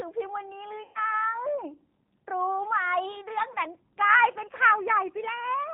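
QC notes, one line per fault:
throughout: G.729 codec. Slightly rough, synthetic speech with nothing above 4 kHz, consistent with an 8 kbit/s G.729A stream rebuilding speech from a vocal tract filter and sparse pulses.
0.83–1.05 s and 3.53 s: VoIP packet loss concealed by the speech codec. A stretched, fading sound replaces about 120 ms of audio, fitting six lost 20 ms packets, then one about 20 ms. The decoder stretches its last pitch and filter, so the speech stays weak or distorted briefly afterwards.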